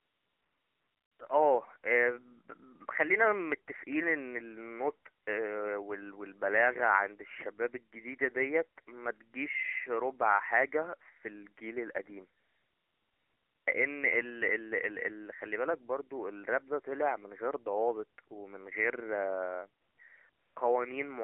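Throughout the clip the speech carries the sound of the AMR narrowband mobile codec. The audio is confined to a telephone band of roughly 300 Hz to 3.4 kHz, so it sounds thin and boxy with no air above. The codec rebuilds the voice from a vocal-tract model and sparse excitation pulses, and the plainly audible buzzy, synthetic texture fits a low mode of around 7.4 kbps.

AMR comfort noise replaces the real background wherever the phone stopped sending speech frames: 0.00 to 1.20 s, 5.24 to 5.26 s, 12.40 to 13.66 s, 19.82 to 19.98 s and 20.30 to 20.56 s. In these gaps the receiver generated a smooth, steady synthetic hiss from a coarse level and spectrum description. It switches in and out abruptly.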